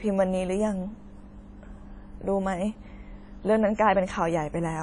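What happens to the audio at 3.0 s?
At 3.0 s, as throughout, the speech stops dead above 10.1 kHz with smeared low-bitrate artefacts, likely low-bitrate audio saved at a high bitrate. The clean second pass left that earlier damage untouched.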